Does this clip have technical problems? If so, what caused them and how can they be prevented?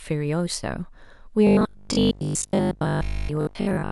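Yes. From 1.47 s to the end, the speech becomes a rigid, metallic 50 Hz buzz that only loosely follows the words. This is robotic sound from repeated short buffers. The likely cause is audio arriving too seldom, so playback keeps looping the last 20 ms while most of the real signal is skipped. A larger jitter buffer and steadier network delivery or processing scheduling would prevent it.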